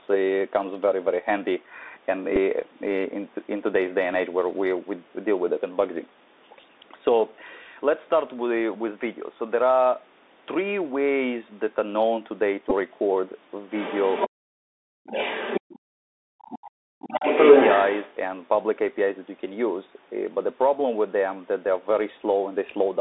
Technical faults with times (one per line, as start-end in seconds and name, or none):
0.00-23.00 Bluetooth CVSD headset codec
2.36-2.38 Bluetooth headset packet repeated
12.70-12.72 Bluetooth headset packet repeated
13.72-14.29 other side's voice leaking through
14.30-15.15 speech suppressed in double talk
15.15-15.79 other side's voice leaking through
15.99-17.25 speech suppressed in double talk
17.23-18.14 other side's voice leaking through